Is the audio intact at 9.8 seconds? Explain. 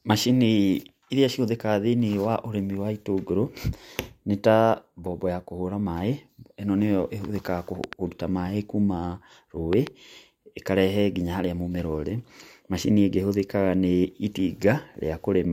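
No. A loud pop, actually a pair of pops, sits between 9.73 and 9.89 s, peaking roughly 10 dB above the speech. The likely cause is a sudden voltage step or pulse, such as from a plug, a switch, static discharge or a driver glitch, entering the signal path, with the following circuitry shaping each spike into a brief thump. The speech continues underneath, but two sharp, percussive knocks land on top of it in quick succession.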